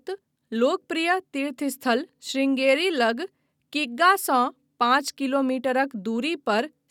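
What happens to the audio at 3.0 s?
Nothing goes wrong at 3.0 s; the speech there plays through intact, with no dropout, click, distortion or other fault.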